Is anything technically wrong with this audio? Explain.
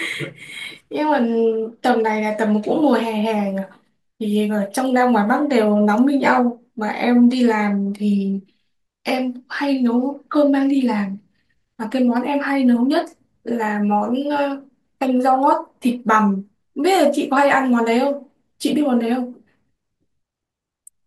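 No, the signal shows no technical faults anywhere in the recording.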